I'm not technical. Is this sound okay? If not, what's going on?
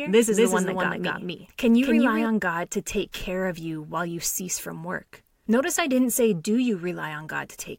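No. From the very start until 2.26 s there is a doubled audio track: the speech plays twice, the second copy about a fifth of a second behind and just as loud. Unlike an echo, it doesn't fade or sound roomy, and it stops abruptly. A second, slower recording path is the likely cause.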